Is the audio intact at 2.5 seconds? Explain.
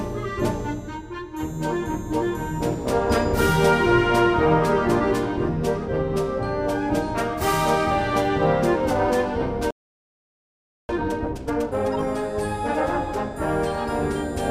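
Yes, at 2.5 seconds the audio plays through intact, with no dropout, click, distortion or other fault.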